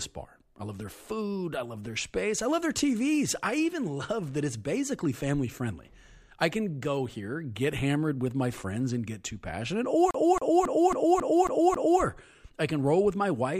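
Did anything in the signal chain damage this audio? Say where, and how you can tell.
Yes: a CD stuck on one turn at playback, from 10.11 to 12.02 s, repeats the same 0.27 s slice of speech seven times, each jump briefly muting.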